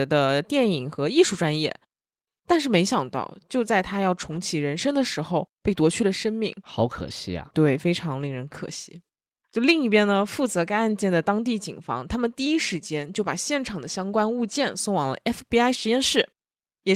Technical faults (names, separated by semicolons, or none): none